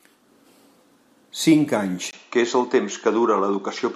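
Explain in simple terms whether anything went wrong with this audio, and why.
At 2.11 s the speech goes duller and stays that way to the end, after a tiny gap of about 20 ms. That points to the input being switched to a poorer device, which cuts the top end above about 7.4 kHz while the loudness stays about the same.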